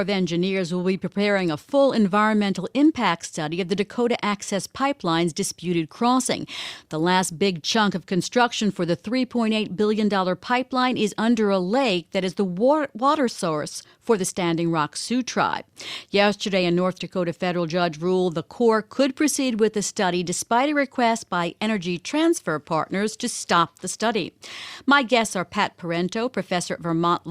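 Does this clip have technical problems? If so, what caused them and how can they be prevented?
No, there are no technical problems in this speech clip. Since nothing has gone wrong, there is nothing here that calls for prevention.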